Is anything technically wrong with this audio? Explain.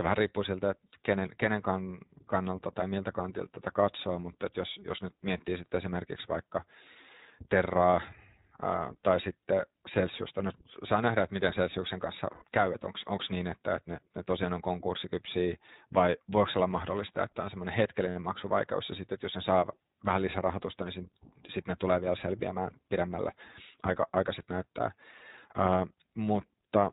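Yes. The whole recording has passed through the iLBC codec, and in two places frames of it were lost in transit.

Throughout, the iLBC codec limits the band to narrowband, so nothing above 4 kHz survives. The coding damage is plainly audible. Each 20 ms frame's excitation is coded on its own at a rate consistent with 15.2 kbps, which leaves the speech intelligible but slightly rough and synthetic in texture.

The lost iLBC frames fall at 12.32 to 12.44 s, about 100 ms just before "käy että onko niin", and at 18.10 to 18.16 s, about 60 ms between "mahdollista että on semmoinen" and "maksuvaikeus ja sitten että". At each one the decoder repeats the last pitch cycle mixed with noise. The result is a brief held, buzzy vowel, and the speech then recovers cleanly because each frame decodes independently.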